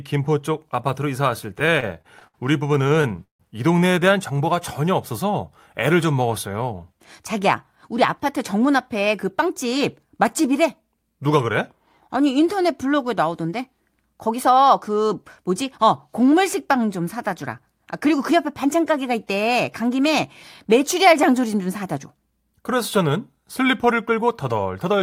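From 1.59 to 3.41 s the speech breaks into repeated stalls (stutter). Packets arrived late, so the jitter buffer kept running dry. The receiver bridged 17 gaps by extending the last sound. The longest gap is 160 ms. Together the fills add 400 ms, about a fifth of that stretch. Nothing is lost. The speech drags and catches instead.

Jitter buffer speed-up follows four times: 6.62 to 8.25 s at 105%, 14.27 to 15.11 s at 107%, 18.06 to 18.97 s at 104%, and 24.12 to 24.93 s at 108%. The buffer was holding too much audio. To shrink the delay, the receiver cut many tiny pitch-period slices. Each pass trims a tenth of a second or less. Pitch stays put. The speech just sounds briefly hurried in the faster passes.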